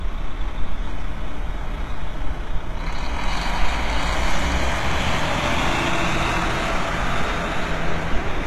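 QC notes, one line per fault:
Throughout: HE-AAC compression, likely. The treble sounds rebuilt rather than real, gritty and metallic, with harmonics that do not line up. Nothing sounds above 12.3 kHz. Damage is plainly audible, which points to a very low bitrate, around 16 kbps.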